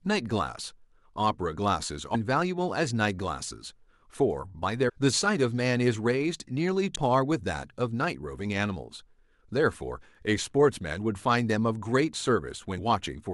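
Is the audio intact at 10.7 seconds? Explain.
Yes, at 10.7 seconds the speech runs intact, with no dropout, click, distortion or other audible fault at that moment.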